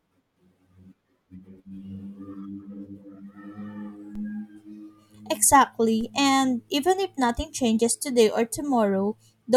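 At 4.15 s, a DC step occurs. The waveform's zero line jumps by about -33 dBFS. It then drains away, as through a 5 Hz high-pass. A low thump marks it. At 6.01 s, an identical step repeats. The speech continues unaffected.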